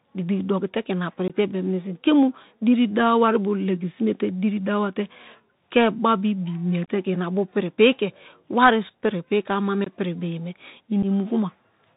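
The whole thing runs through a Bluetooth CVSD headset codec, and you can plainly hear it. The one-bit delta coding caps everything at 4 kHz, s sounds come out scratchy, and there's a grainy hiss underneath, which fits a 64 kbps CVSD link. On top of that there's unconcealed Bluetooth headset packet loss. Right after "igbiki dokite ke", around 1.28 to 1.35 s, about 19 ms drops out. A scattered 30 ms goes missing at 6.85 to 6.89 s, just before "ke ma". Another 19 ms drops at 9.84 to 9.92 s, and a brief 7.5 ms at 11.03 s. Each gap is a hard-edged hole where packets were lost and replaced with silence or an idle pattern, and the speech comes back quieter for a moment afterwards.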